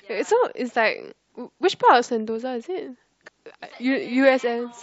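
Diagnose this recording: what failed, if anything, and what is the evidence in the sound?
Codec stage: damaged data in a compressed stream. A brief blip interrupts the speech from 3.26 to 3.28 s. Corrupt frames made the decoder misread them and resynchronise.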